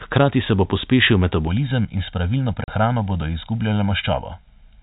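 A short speech recording heard through G.711 telephone coding, band-limited below 4 kHz, carries two faults. From 1.47 s to the end, channel delay (comb filtering) makes the voice hollow and phasey. One channel arrives roughly 1.5 ms late, and when the two are summed to mono the shared content cancels at evenly spaced frequencies, with the first notch roughly around 400 Hz. A spectrogram shows fixed, regularly spaced dark horizontal stripes running through every syllable from 1.47 s onward. At 2.64 to 2.68 s, packet loss filled with silence cuts a 40 ms hole into the speech, which fits two lost 20 ms packets. The receiver played silence there instead of concealing the gap, so the sound drops abruptly with hard edges. The waveform shows a flat line with sharp cut edges, and the spectrogram shows a blank vertical band.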